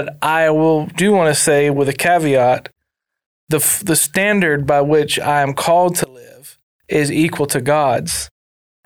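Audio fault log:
6.04–6.84 s, one channel inverted: speech falls about 24 dB to a faint residue, likely as reversed polarity on one channel cancels the common content.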